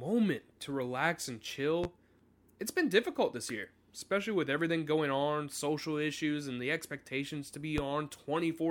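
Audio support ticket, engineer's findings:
Loud pop at 1.84–1.88 s and 7.78–7.82 s, single thumps about 10 and 15 dB over the speech, which runs on underneath. Likely a voltage spike from a plug, switch or static.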